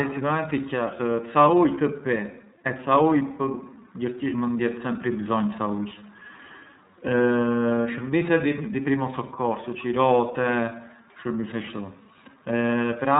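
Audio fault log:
Throughout, iLBC codec: the speech is cut off above 3.8 kHz and has a plainly audible rough, synthetic edge. Each frame's excitation is coded on its own, with no help from the previous one, which leaves a graininess that fits 30 ms frames at about 13.33 kbps. A simple low-pass filter would dull the sound without adding roughness, and a cleaner narrowband codec would keep the texture smooth.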